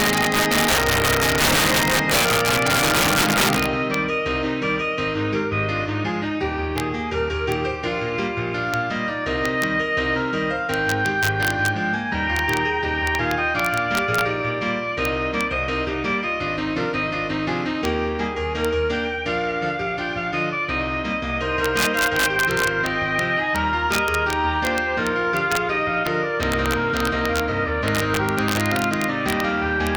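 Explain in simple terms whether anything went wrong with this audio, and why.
Something did go wrong, all the way through: integer overflow. On the loudest moments the signal gets pushed past the biggest number the system can hold, and instead of stopping there it wraps around to the opposite extreme. Only a small fraction of the audio is affected, but each one gives a harsh crack, much sharper than ordinary clipping.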